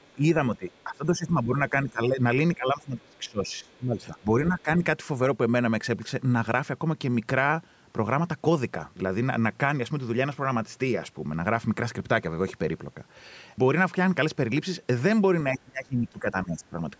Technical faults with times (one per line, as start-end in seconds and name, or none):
0.04-0.13 other side's voice leaking through
0.15-0.24 speech suppressed in double talk
0.57-2.20 speech suppressed in double talk
0.69-0.82 other side's voice leaking through
2.55-4.68 speech suppressed in double talk
3.72-3.78 other side's voice leaking through
15.53-16.75 speech suppressed in double talk